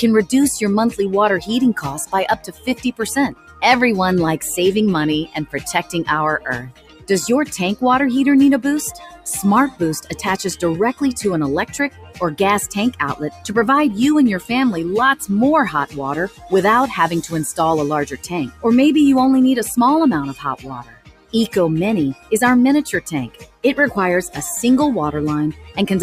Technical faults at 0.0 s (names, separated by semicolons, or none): noise suppressor applied to music or sounds